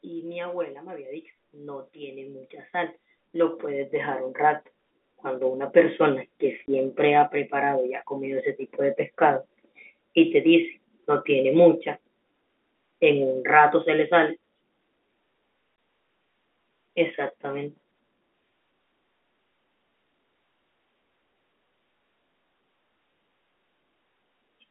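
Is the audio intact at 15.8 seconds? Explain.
No. At 15.76 to 15.78 s the speech drops into a brief 20 ms hole with hard edges. This is packet loss filled with silence: a single packet went missing and the receiver played nothing in its place instead of concealing the gap.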